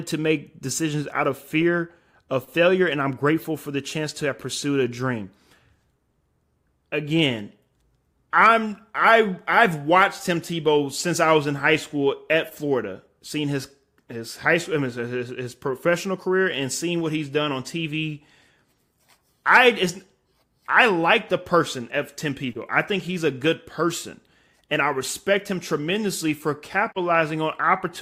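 At 26.91 to 26.98 s, near the end of the speech, a digital broadcast dropout briefly mutes the audio. The receiver discarded a corrupt or missing frame, fading out over 20 ms. The 32 ms gap suggests one lost frame, and the programme content in it is gone.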